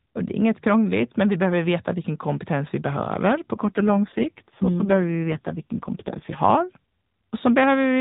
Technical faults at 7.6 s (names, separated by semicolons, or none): none